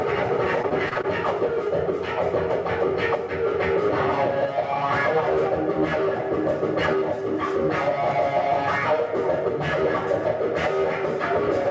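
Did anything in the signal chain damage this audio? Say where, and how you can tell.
Yes. In the network stage, between 0.62 and 1.06 s, repeated packet loss leaves five short holes, the longest 26 ms. The jitter buffer patches each by extending the previous sound, so about a fifth of that stretch turns choppy over the G.722 call path's 8 kHz-limited band.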